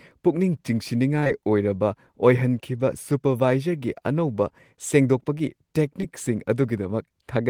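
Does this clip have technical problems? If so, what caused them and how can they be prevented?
Yes. Short concealed packet loss occurs at 1.19–1.24, 1.24–1.27 and 1.27–1.31 s, and again at 6.01–6.04 s just after "ꯁꯨꯄꯔꯚꯥꯏꯖꯔꯒꯤ ꯑꯅꯧꯕ ꯁꯦꯡꯗꯣꯛꯄꯒꯤ". Each time about 20 ms of audio arrived too late, and the decoder extended the preceding sound for 13–27 ms before blending back, leaving a brief smear. A larger jitter buffer and a steadier network connection would prevent these gaps.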